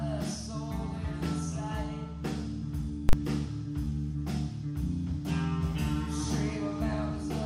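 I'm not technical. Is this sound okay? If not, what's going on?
No. At 3.09 s there is one loud bang: invalid numbers at full scale, where a calculation failed and pinned the output to maximum level for 40 ms.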